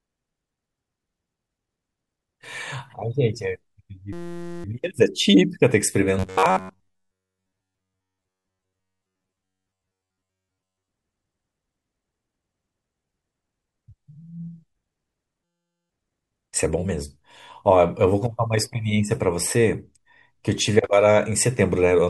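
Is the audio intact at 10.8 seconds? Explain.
No. From 6.19 to 10.88 s, audio likely arrived too seldom, so the playback filled most of the gaps by repeating the last short buffer, about 10.7 ms long. That produces robotic sound from repeated short buffers: a rigid, metallic buzz at 93.8 Hz loosely tracking the speech.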